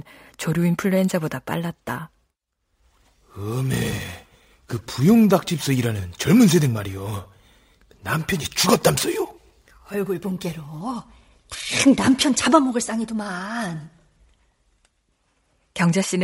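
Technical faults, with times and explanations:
0.0 to 10.81 s, imaging from sample-and-hold upsampling: the audio was raised from a rate that fits 24 kHz to 48 kHz by repeating each sample without a smoothing filter, so a mirrored copy of the speech spectrum fills 12 to 24 kHz at about 20 dB below the signal, heard as a bright metallic fizz that tracks the speech.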